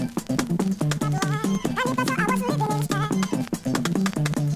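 Wrong sample rate runs throughout the clip. Samples are played back at double the intended rate, which fits audio recorded at 16 kHz being played at 32 kHz without conversion, so everything runs 2.0 times fast and sits a full octave, 12 semitones, high.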